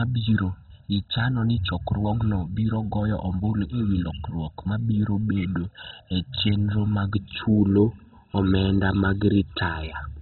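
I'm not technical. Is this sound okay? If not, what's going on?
No. Throughout the recording the speech sounds muffled and gritty, with a bubbling, grainy edge and nothing above about 4.1 kHz. That is likely MP2 compression squeezed too hard, which switches off the upper bands and roughly rounds off what remains. That grit sets it apart from ordinary muffling.

From the start until about 7.15 s there is also channel delay (comb filtering). One side arrives roughly a millisecond and a half late, and when the two sides are combined some pitches cancel, starting around 400 Hz. The result sounds hollow and pipe-like, and it clears after 7.15 s.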